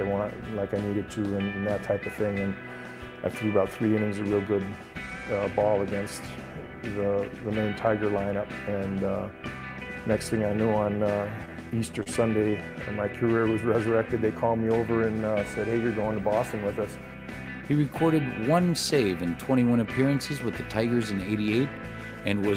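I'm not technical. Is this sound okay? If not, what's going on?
No. Between 11.45 and 12.08 s there are repeated stalls (stutter). The audio arrived over the network in small pieces, and several came late, so the player's short waiting store of incoming audio ran dry five times in about two-thirds of a second. Each time, it kept the last bit of sound going until more arrived, about 75 ms of filler in total, the longest pause about 30 ms. Nothing is lost, but the sound drags and hiccups there.

Just after, from 12.50 to 12.54 s, comes a short stall from a late packet. One more piece of audio was late, and the player stretched the sound just before it by about 19 ms until it turned up, then carried on from the same place. Nothing is skipped, but that moment is held slightly too long and can come across as a brief buzz or a small dip.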